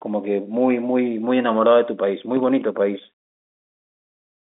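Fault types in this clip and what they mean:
No faults can be heard anywhere in this clip.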